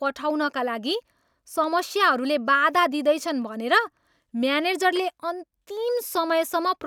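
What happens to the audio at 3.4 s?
At 3.42 s a handful of samples, likely lost somewhere in the audio path, are simply missing from the stream: dropped samples. The gap is only about a tenth of a millisecond, far too short to take any of the speech away, but the waveform jumps straight from one value to a later one with nothing in between. That abrupt step is heard as a single sharp click and shows as a thin vertical line through the spectrum.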